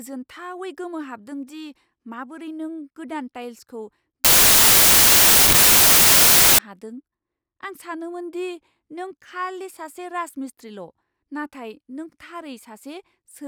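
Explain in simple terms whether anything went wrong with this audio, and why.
From 4.25 to 6.59 s, right after "माबोरै नों गोदान टाइल्सखौ", the speech turns into loud hiss. These are samples built from the wrong bytes: the player assembled each sample's bytes incorrectly, so its tiny, rapidly changing details became the loudest part.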